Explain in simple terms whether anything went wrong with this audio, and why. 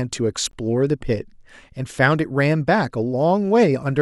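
At 0.51 s the speech briefly drops out. A tiny hole of silence, about 19 milliseconds long, cuts in with softened edges, and the speech resumes right where it stopped. This is a gap at a join of encoded pieces. The recording was compressed in separate chunks and then stuck together untrimmed. Each chunk keeps a short stretch of silence the compressor adds at its start and padding at its end, and that leftover silence sits at the seam.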